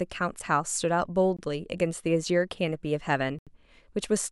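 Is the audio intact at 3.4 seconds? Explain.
No. A block of digital silence runs from 3.39 to 3.47 s: likely because the program failed to fill the output buffer in time, about 80 ms of samples became zeros. The speech drops abruptly to silence and returns without a fade, leaving a short hole.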